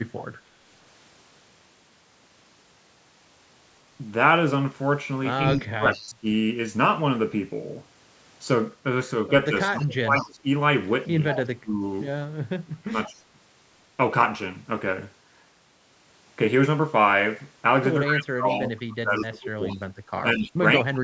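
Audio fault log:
0.17–0.41 s, 5.48–6.06 s, 9.80–10.28 s, 11.28–11.42 s, 18.51–20.94 s, echo leak: a delayed copy of the speech trails the original by 183 ms. It sits roughly 20 dB down in the first and last stretches, near 25 dB down at 5.48 s, and climbs to around 15 and then 10 dB below the speech at 9.80 and 11.28 s. The steady delay likely comes from a far-end loudspeaker feeding its microphone, with the echo canceller letting part of it back into the call.
5.54–6.26 s, 9.49–13.14 s, 18.06–21.03 s, speech suppressed in double talk: the talker's level sinks sharply and breaks into patches while both sides talk at once. The drops reach roughly 30 dB in the first and last spans and about 25 dB in the middle one. About 0.7 s, 1.5 s and 2 s of speech are affected. The cause is likely the echo canceller confusing the local voice with loudspeaker echo during overlap and attenuating both together.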